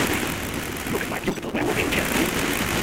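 A block size mismatch (truncated) runs through the whole clip: one stage hands over longer blocks than the next stage consumes, so the tail of every block is discarded. The sound carries a steady buzz at 172 Hz, the rate at which blocks are cut, and plays about 1.88 times faster than it should while keeping roughly its normal pitch. The buzz rate fits reads of 256 samples.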